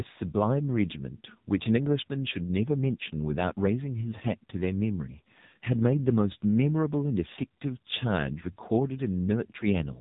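AMR narrowband mobile codec damage runs throughout the speech: nothing above 3.8 kHz survives, and the vocal-tract model, fed with only a few pulses per short subframe, leaves the voice heavily buzzy and synthetic, which fits a low mode around 6.7 kbps.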